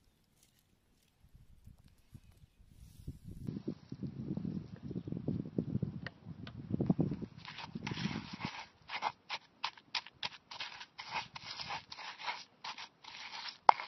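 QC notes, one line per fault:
3.47 s to end, input switched to a poorer device: the recording likely jumped to a lesser microphone path without a gap. From there nothing is heard above 5.8 kHz, so the sound turns dull and boxy, the level shifts by about 5 dB, and a new faint background noise floor appears.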